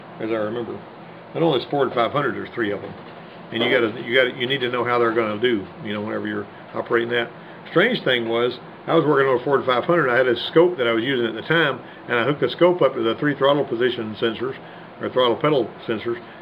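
From start to finish the clip carries sample clock jitter: the converter's timing wanders by around a microsecond, so each sample lands slightly off its proper instant. Steep, fast-changing parts of the waveform suffer most, leaving a gritty hiss roughly 45 dB under the sound that swells on loud, bright passages. Unlike a fixed background hiss or tape noise, it drops away completely whenever the audio goes quiet, tracking the signal rather than sitting beneath it.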